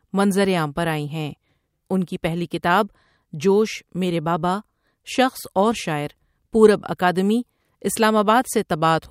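No technical fault can be heard anywhere in this speech recording, so there is nothing to place on the timeline.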